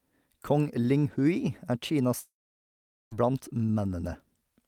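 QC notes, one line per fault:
2.19–3.13 s, long network dropout: the speech cuts out for nearly a second. The last sound smears into a brief fading buzz, then about 0.79 s of silence before it picks up again, with roughly 0.92 s simply gone, likely from packets never arriving.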